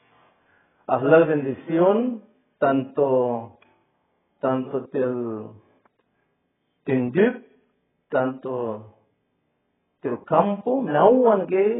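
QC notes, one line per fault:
Throughout, AAC compression: nothing above about 3.8 kHz, so the speech comes across dull and boxed-in, and the damage is heavy, with a smeared, watery texture where the encoder has starved the spectrum. That pattern is likely an AAC-LC encode squeezed hard, and a cut-off that low fits a bitrate somewhere around 9 kbps, where the hearing model throws away most of the top end to stay within budget.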